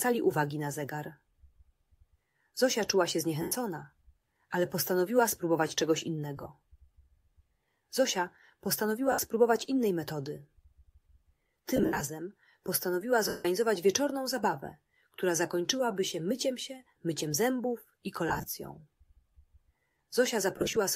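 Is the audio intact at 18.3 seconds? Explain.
No. From 18.28 to 18.48 s, lost LE Audio frames, in short runs of at most about 20 ms, are covered by the LC3 decoder repeating the last spectrum with random signs, giving a noisy smear rather than the silent gaps of a plain dropout.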